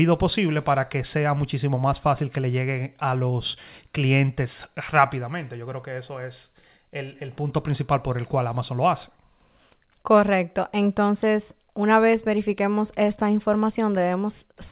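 No technical faults are audible.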